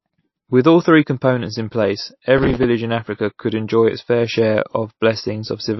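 A short speech recording that sounds like it's been squeezed through low-bitrate MP3 compression the whole way. Everything above 5.8 kHz is gone, and the dull, watery swirl on the sibilants fits a bitrate somewhere around 28 kbps, likely the encoder starving for bits and dropping weak detail frame by frame. Right after "three components in place", from 2.38 to 2.64 s, there's a burst of processor overload crackle. The system kept missing deadlines on tiny buffers of roughly 5 ms, a dozen or more in a row, and each miss replayed a hard-edged scrap of old audio, so you hear gritty tearing until the load drops.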